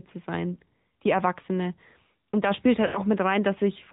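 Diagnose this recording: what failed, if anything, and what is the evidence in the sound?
Codec stage: AMR narrowband mobile codec throughout. The spectrogram shows a hard ceiling at 4 kHz, and the buzzy, synthetic timbre fits roughly 10.2 kbps AMR-NB.

Network stage: lost AMR speech frames. There is a brief warbling dip at 0.54–0.58 s, which fits one 20 ms frame. At 2.86–3.00 s, after "da spielt", the sound is smeared and fading, as 80 ms of concealment decays in the waveform.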